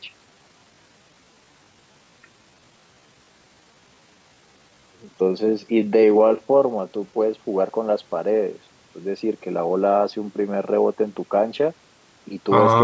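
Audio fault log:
0.00–7.18 s, time-stretched section: software likely lengthened this stretch to fill a longer slot, repeating short slices to hold the pitch. The speech runs at about 0.74 of its natural pace, dragging while its pitch stays put, then abruptly returns to normal speed.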